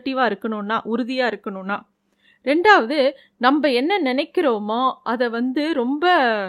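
No technical faults can be heard anywhere in the speech recording, and the signal stays steady and intact throughout.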